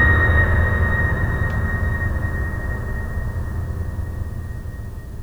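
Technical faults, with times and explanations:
No technical faults can be heard in this music clip; the signal holds steady and intact throughout.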